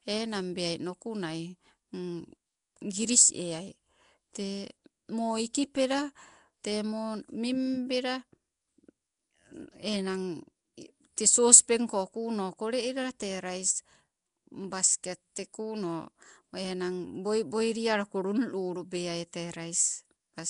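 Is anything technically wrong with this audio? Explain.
Yes. Throughout the speech there is plainly audible damage, likely from Nellymoser compression. Coarse two-bit coding of short blocks smears transients into a watery blur, and empty weak bands are refilled with noise, giving a rough hiss. That noise halo, rather than warbling tonal artefacts, sets it apart from MP3-style swirl. Nothing remains above 10.6 kHz, which fits a rate near 44 kbps.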